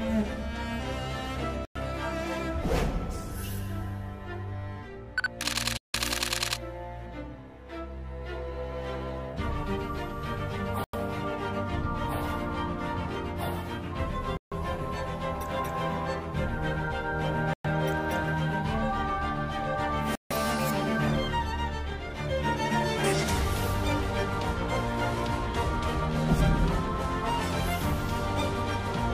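Bluetooth stall, six times: at 1.65, 5.77, 10.84, 14.37, 17.53 and 20.15 s. Each time the sound drops to dead silence for roughly 0.1 to 0.17 s (the longest, about 170 ms, at 5.77 s) and then resumes abruptly. The likely cause is radio interference delaying the wireless link, so the receiving buffer empties and playback halts until the retransmitted packets arrive and the stream carries on.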